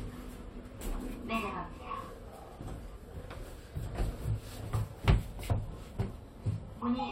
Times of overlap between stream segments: 2.16, 3.14, 4.12, 5.11

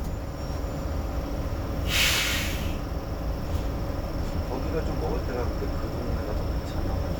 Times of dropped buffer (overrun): 3.45, 5.04

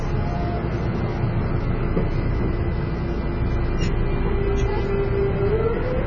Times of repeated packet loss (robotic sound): none

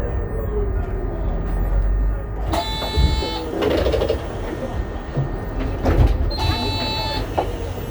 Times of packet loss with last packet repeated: none

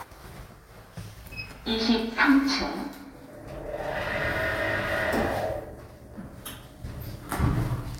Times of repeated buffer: none

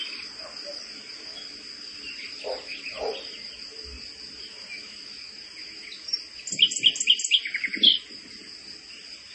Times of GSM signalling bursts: none

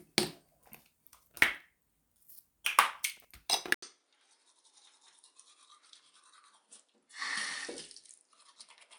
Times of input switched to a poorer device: 3.74-8.98

